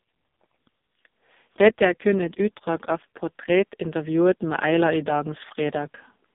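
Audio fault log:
throughout, AMR narrowband mobile codec: the speech passes through a low-rate mobile voice coder that rebuilds it from a vocal-tract model and sparse pulses. Heavy damage leaves it buzzy and synthetic, which fits AMR-NB's lowest 4.75 kbps mode, and nothing survives above 3.7 kHz or below 200 Hz.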